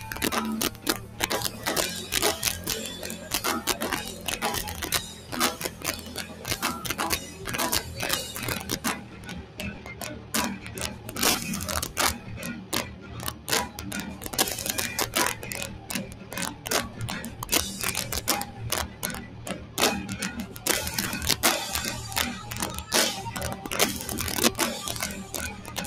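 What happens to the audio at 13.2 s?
Around 13.2 s the sound sinks and thins, with its steady or decaying parts pulled down by up to about 7 dB over roughly a second in total, between 12.18 and 14.26 s. This is sound cut by the noise suppressor, which mistook this passage for noise and attenuated it harder than its surroundings.

The level also pumps and flutters at that moment, with sustained material and tails dipping while attacks pass. A noise suppressor applied to music or sounds is running through the whole clip, treating steady content as noise and swinging its gain by about 10 dB.

Loud peaks there can break into harsh, violent cracks, far sharper than ordinary clipping. This is integer overflow: the signal is driven about 7 dB past full scale, and the small share of samples that exceed it wrap to the opposite sign instead of being limited.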